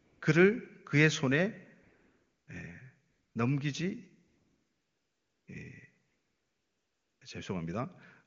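AMR comfort noise fills the speech pauses at 0 to 0.21, 1.83 to 2.47, 3.09 to 3.35, 4.27 to 5.47 and 6.07 to 7.21 s. The sender stopped transmitting speech frames, and the receiver synthesised a steady, smooth hiss in place of the real background. Unlike a dropout or noise gate, these pauses never fall to true silence. The texture simply switches against the clear wideband speech.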